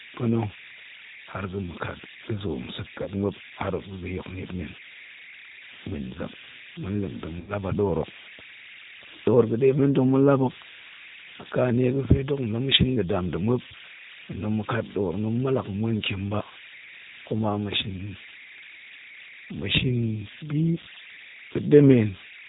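Running through the whole speech clip are converter idle tones. A delta-sigma converter working without dither has settled into a repeating bit pattern on small signal levels, and that pattern surfaces as a whistle around 2 kHz. It sits only about 16 dB below the speech, so it is heard in pauses and adds a grainy edge under quieter passages. Its pitch is set by the input's DC offset rather than by anything in the speech.

Also throughout is G.729 codec damage, plainly audible. The speech has been rebuilt from a vocal tract filter, a pitch predictor and a few pulses per subframe, which fits an 8 kbit/s G.729A stream. Nothing above 4 kHz survives, so the voice is band-limited and dull on top. It is intelligible but rough and slightly synthetic.

At 3.02 s comes the first VoIP packet loss concealed by the speech codec, lasting to 3.09 s. About 40 ms of audio is missing, which points to two lost packets. 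The decoder bridges the gap by repeating its last pitch and filter state at falling gain, so the speech is stretched into a short buzzy tone or coloured noise that fades. The sound stays weak briefly after packets resume.

At 7.40 s a longer loss of the same kind runs to 7.53 s. This time about 80 ms is missing, suggesting four packets.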